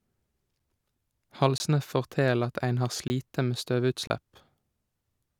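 At 1.58 s, 3.08 s and 4.07 s the speech drops into a block of digital silence, about 20 ms, 20 ms and 27 ms long, likely where the output buffer went unfilled and zeros took its place. The sound cuts out and back with no fade, each gap heard as a short hole. The gap itself is true silence, not a fade or a repeated fragment.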